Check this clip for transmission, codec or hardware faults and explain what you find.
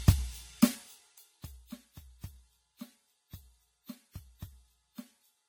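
The clip has two faults: a smeared, hollow tone across the whole piece of music, and a zipping sound while the level drops near the start.

Generation loss runs throughout. The music sounds swirly and hollow, and attacks are blurred. The damage goes beyond what one encode would leave. The likely cause is repeated lossy coding, around ten passes, consistent with AAC-LC at about 64 kbit/s. Each pass quantises on a shifted frame grid. So noise and spectral gaps pile up. Nothing is present above 19.8 kHz.

Zipper noise appears from 0.67 s to 1.67 s. The level falls by roughly 25 dB in 1 dB steps, around twenty per second. No smoothing joins the steps. Each jump leaves a small click. Together they make a fast ticking that rides on the music as it fades.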